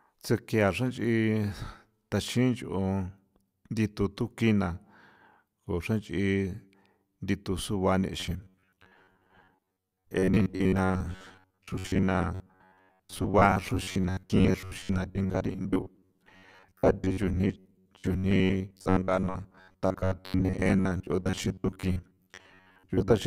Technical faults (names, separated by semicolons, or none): robotic sound from repeated short buffers